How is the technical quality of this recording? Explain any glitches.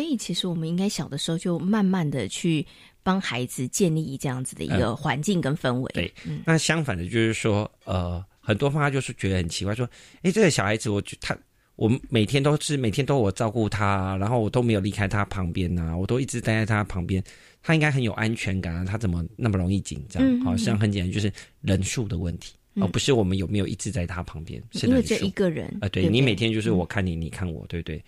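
The recording's technical quality is good, and there are no glitches to explain.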